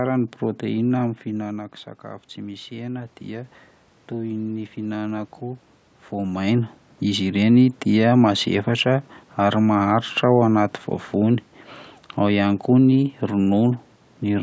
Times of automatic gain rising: 1.26-6.42

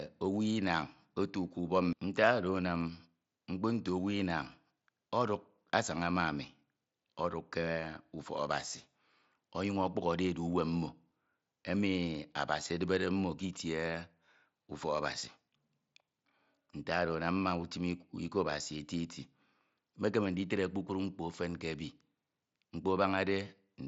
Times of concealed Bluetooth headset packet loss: 11.10

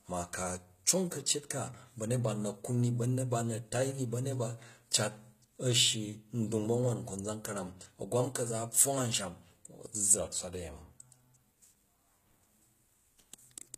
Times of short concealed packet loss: none

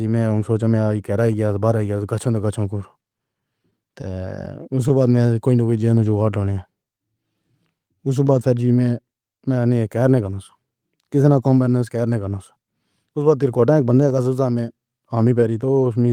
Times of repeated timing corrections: 0.28-15.95

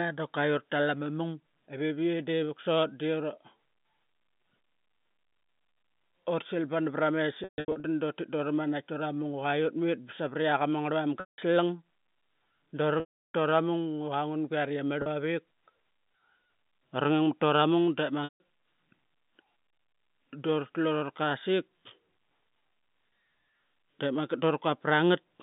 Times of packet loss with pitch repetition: 7.44-7.84, 11.20-11.38, 13.00-13.31, 15.02-15.06, 18.24-18.40

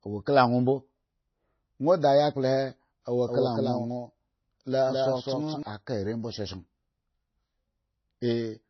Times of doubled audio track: 3.27-5.63

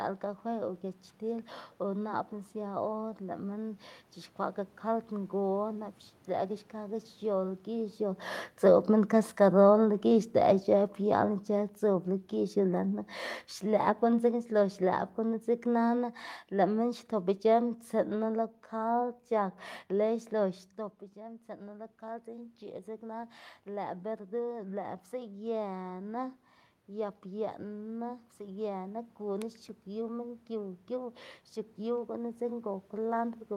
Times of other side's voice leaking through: none

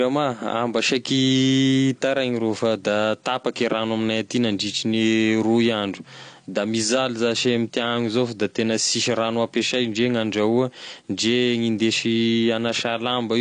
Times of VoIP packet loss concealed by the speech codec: none

